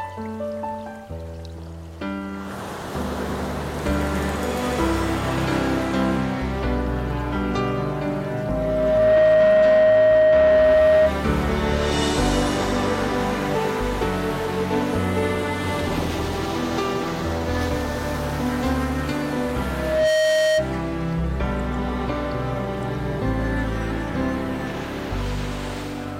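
A microphone is picking up the loudspeaker it feeds, and at 624 Hz the loop gain exceeds one, causing loudspeaker feedback squeal. A pure tone swells over about a second and a half from 7.85 to 11.16 s, reaching roughly 10 dB above the audio, then returns more briefly and more quietly from 19.70 to 20.69 s.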